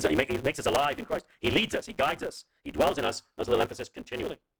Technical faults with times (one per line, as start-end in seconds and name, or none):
0.00-4.59 block size mismatch (truncated)